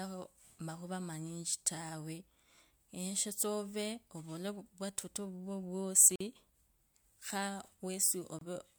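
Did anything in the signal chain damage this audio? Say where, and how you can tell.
Yes. The damage is at the codec stage: a gap at a join of encoded pieces, twice. Silence cuts in from 6.16 to 6.20 s, about 47 ms, and from 8.39 to 8.41 s, about 25 ms. The edges are smeared. Separately encoded pieces were joined untrimmed, leaving encoder delay and padding.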